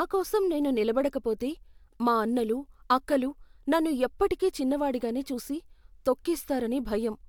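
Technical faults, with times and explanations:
No technical faults heard.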